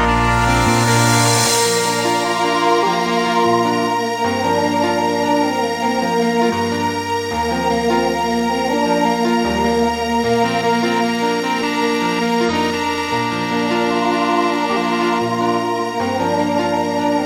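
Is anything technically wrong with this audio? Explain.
Yes. At 2.79, 6.46, 8.69, 12.45 and 14.73 s the audio lurches forward, each time joined by a short smeared blip of about 50 to 60 ms rather than a sharp click. These are compressed frames skipped: whole frames, each 46.4 ms long, never reach the output. Each jump drops somewhere between a tenth of a second and nearly half a second. Neighbouring frames overlap, so each join blurs instead of snapping.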